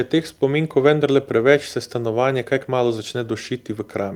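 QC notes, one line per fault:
No faults to note in this speech clip.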